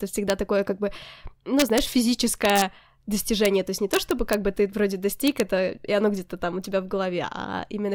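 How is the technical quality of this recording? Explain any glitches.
The speech is marred by integer overflow, which shows up as harsh cracks at 0.30 s and 3.45 s, and over 1.60–1.78, 2.45–2.62, 3.94–4.34 and 5.27–5.40 s. Loud peaks pushed at most about 1 dB past the integer ceiling and wrapped to the opposite sign instead of limiting, so each one snaps violently, far sharper than clipping.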